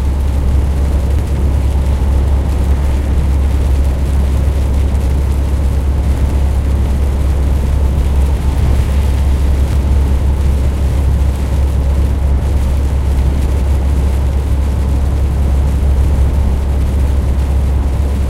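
At 1.19 s and again from 9.45 to 9.92 s, compressed frames are skipped: roughly a tenth of a second of audio drops out, so the sound jumps ahead at each join.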